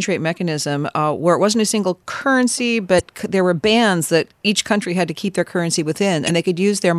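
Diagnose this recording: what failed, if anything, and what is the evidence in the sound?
Codec stage: damaged data in a compressed stream causes brief disruptions at 2.97–3.01 s and 6.26–6.30 s, as the decoder misreads corrupted frames and resynchronises.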